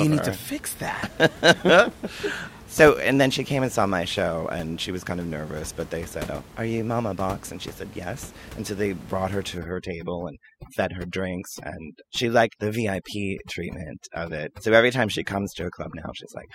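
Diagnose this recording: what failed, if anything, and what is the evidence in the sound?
The failure is overdone noise removal in the call-processing stage. From 9.58 s to the end at 16.55 s, the room noise, about 19 dB below the speech before that point, collapses into near silence with sparkling specks. The suppressor is set too aggressively. It drives individual frequency bands down or out whenever they sit near its noise estimate. Low-level parts of the speech fall under that threshold and vanish along with the background.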